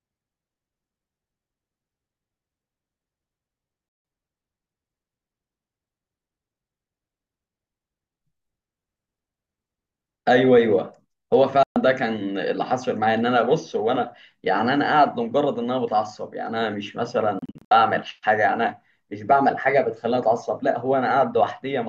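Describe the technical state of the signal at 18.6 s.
At 18.6 s the speech signal is intact, with no audible technical fault at that moment.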